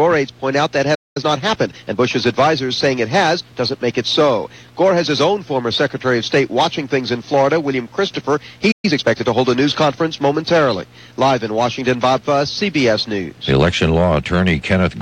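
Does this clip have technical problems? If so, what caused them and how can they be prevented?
Yes. There are two playback stalls, at 0.94 to 1.17 s and at 8.71 to 8.85 s. The sound stops in mid-flow and goes silent for about 0.21 s and then 0.12 s, and afterwards resumes. The likely cause is that the player's buffer ran dry or its audio thread was blocked, so it had nothing to send to the output until it recovered. To prevent this, use a larger playback buffer and run audio on a high-priority thread that nothing else can block.

Each stall is followed by time-compressed catch-up, from 1.17 to 1.99 s and from 8.85 to 9.33 s. The player clears the backlog built up during the gap by cutting out small pieces and cross-fading across the joins, so the audio runs at 1.25 times normal speed with its pitch unchanged. The joins give those passages a hurried quality. To prevent this, avoid the stalls above, or let the player drop the backlog instead of compressing it.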